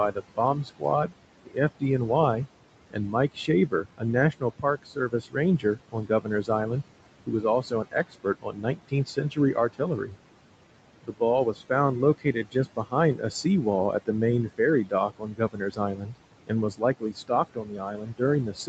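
Noise suppressor artifacts run through the whole recording. The suppressor pulls down, frame by frame, whichever bands it judges to be steady background, here by about 18 dB. The room noise, which sits about 15 dB under the speech, therefore drops away in the gaps and comes back underneath each phrase. It pumps with the speech rather than staying put, and that is how it differs from plain room noise.

Speech cut by the noise suppressor follows, in six stretches: 0.12 to 1.83 s, 2.91 to 6.5 s, 7.26 to 10.16 s, 11.03 to 11.6 s, 12.18 to 13.45 s, and 14.06 s to the end. Inside these spans the suppressor mistook parts of the speech for noise and turned them down with the background, by about 17 to 19 dB at the deepest. Soft consonants and word tails sound swallowed. The affected parts add up to roughly half a second in the first span, about a second each in the second and third, and a few tenths of a second in the fourth and fifth. 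Unlike a dropout or a gap from the network, the sound never stops outright. It dips in step with the speech's own quiet moments, and the dips are uneven rather than clean silences. High frequencies above 8 kHz are missing throughout, which fits the call's Opus bandwidth and is not part of these cuts.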